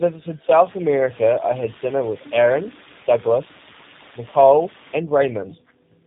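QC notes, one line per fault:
Throughout: tandem speech coding. The speech is rough, muffled and warbly, which fits two low-rate speech codecs in a row, an AMR-NB stage and then G.729A, the second coding the first's artefacts again. A spectrogram shows nothing above 3.8 kHz and smeared, jittery formant bands.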